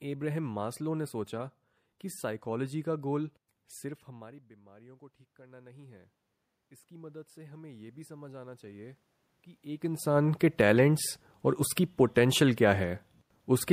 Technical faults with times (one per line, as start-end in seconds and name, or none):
3.82-6.08 automatic gain rising
6.88-9.05 automatic gain rising